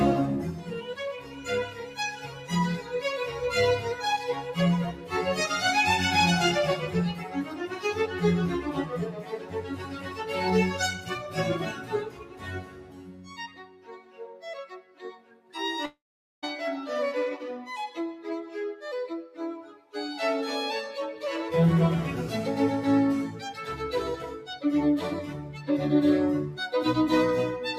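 A speech-tuned noise suppressor has been left running on non-speech audio, and it treats steady or sustained parts of the sound as noise, pulling them down by around 10 dB while sharp onsets pass. Unlike a plain level fade, the loss tracks the material itself, so held sounds and decays sink and the result pumps, flutters or thins out across the whole clip. The clearest cuts, where the suppressor dips particular sounds by about 7 to 11 dB, fall at 0.57–2.97 s, 3.95–4.57 s, 4.92–5.12 s, 6.82–8.17 s, 8.67–10.26 s, 10.95–15.54 s and 19.28–19.94 s. The 10.95–15.54 s stretch is the longest and deepest at about 11 dB, with roughly 4 s of it affected. In each of these the sound is still present but sags or has its tail cut short. That sets them apart from the break at 15.85–16.44 s, where audio stops arriving altogether, most likely a long network dropout. For about 0.57 s the receiver carries the last sound on as a fading buzz or hiss, then leaves about 0.44 s of silence. 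When the audio resumes, roughly 0.58 s of the original is gone rather than merely quieter.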